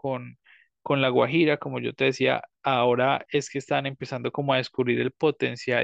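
No faults are audible anywhere in the recording; the speech runs uninterrupted, with no dropouts, level jumps or added noise.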